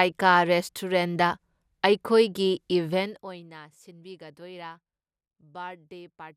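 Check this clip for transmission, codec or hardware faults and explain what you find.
One fault turns up, during a level change in the speech. From 2.9 to 3.51 s a fine ticking, zipping texture rides on the voice as it drops by about 20 dB. This is zipper noise: the gain moves in roughly a hundred unsmoothed steps per second, and each jump leaves a tiny click.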